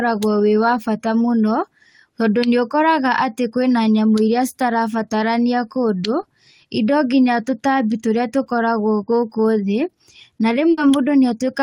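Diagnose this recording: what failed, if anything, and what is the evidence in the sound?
Network side: there's a short concealed packet loss at 6.21 to 6.25 s, where about 20 ms got patched by extending the last sound, leaving a quick smear.

Then a burst of packet loss at 10.71 to 10.79 s: roughly 60 ms was filled with a fading continuation, and the speech resumes with that stretch missing.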